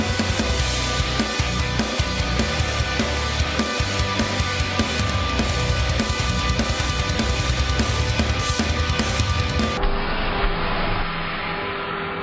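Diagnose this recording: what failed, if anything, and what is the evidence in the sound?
A wrong sample rate at the playback stage: from 9.78 s to the end, the sound slows to one third speed and drops about 19 semitones, which fits 48 kHz audio played at 16 kHz.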